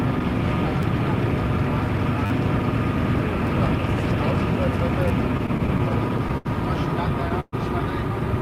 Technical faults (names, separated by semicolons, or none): repeated buffer; repeated stalls (stutter)